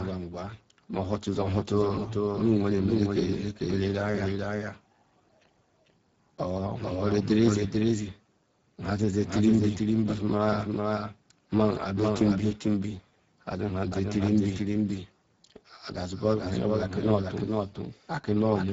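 From start to finish a doubled audio track runs under the speech: a full-band copy about 5 dB quieter trails by roughly 0.4 s, with no decay or room colour, unlike an echo. A second capture path likely caused it. Throughout, Speex codec damage is plainly audible as a hoarse, noisy texture, consistent with a bitrate near 10 kbps.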